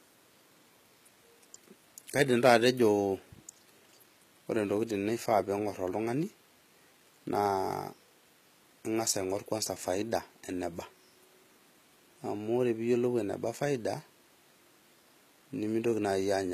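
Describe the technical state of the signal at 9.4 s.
At 9.4 s the speech carries the same damage heard across the whole clip, most likely HE-AAC compression at a very low bitrate, with the sound pointing to around 20 kbps. Only the lower spectrum is properly coded; the treble is rebuilt by spectral band replication, copying lower bands upward under a coarse envelope. The top end stays bright but is not the original, so s sounds come out gritty, metallic or lispy, and the damage is plainly audible.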